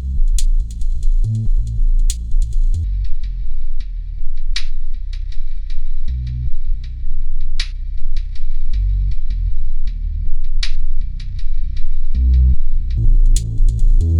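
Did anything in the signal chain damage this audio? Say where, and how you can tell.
Yes. From 2.84 s to 12.97 s there is a section at the wrong speed: the audio runs at 0.565 times its proper rate, so it is drawn out and sits about ten semitones lower. The slowdown and pitch drop arrive together at 2.84 s and release together at 12.97 s. That points to the playback or sample-rate handling stage, likely a clock mismatch where the samples were replayed at a rate well below the one they were captured at.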